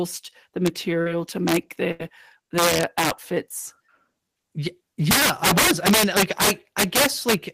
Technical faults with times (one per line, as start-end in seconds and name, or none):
0.66 integer overflow
1.01-1.08 short concealed packet loss
1.48-1.56 integer overflow
1.92-2.01 burst of packet loss
2.58-3.10 integer overflow
5.11-7.34 integer overflow